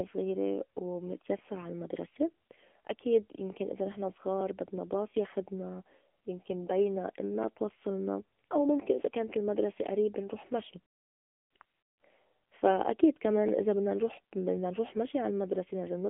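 Across the whole recording the speech runs through an AMR narrowband mobile codec at a low bit rate, which fits a mode near 8 kbps. It sounds buzzy and synthetic. A spectrogram shows a hard ceiling with nothing above 3.6 kHz and thin energy below 200 Hz.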